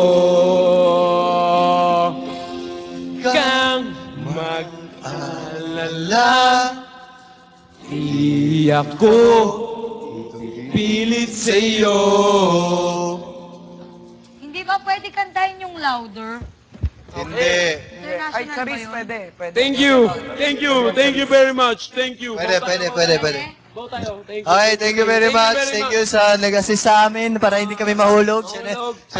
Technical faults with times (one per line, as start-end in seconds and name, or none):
20.47-22.64 drift correction step
26.81-28.80 drift correction step